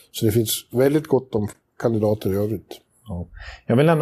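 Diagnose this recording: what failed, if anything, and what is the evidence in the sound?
The failure is at the codec stage, where separately encoded pieces were joined. At 1.53 s, just after "väldigt gott om", the speech drops into a silence of about 16 ms and then resumes exactly where it stopped. The edges are smeared by the codec. This is a gap at a join of encoded pieces. Each piece kept its encoder start-up delay and padded final frame, and the untrimmed padding plays as dead air. The spacing fits pieces about 2 s long.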